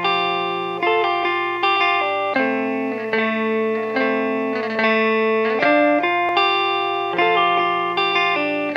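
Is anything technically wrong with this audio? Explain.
Yes. The music skips at 2.34 s and again at 6.29 s, about 4 s apart, each losing roughly 50 ms. This is likely audio missing between chunks: the recorder processes 4-second blocks and drops a short piece at each handover, splicing the two sides together without silence, so the music jumps forward abruptly.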